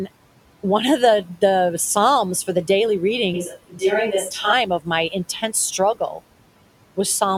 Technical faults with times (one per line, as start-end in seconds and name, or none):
0.00-7.38 noise suppressor artifacts
3.34-4.53 switch to a distant microphone
3.50-3.82 speech cut by the noise suppressor
4.66-4.88 speech cut by the noise suppressor
5.95-6.21 speech cut by the noise suppressor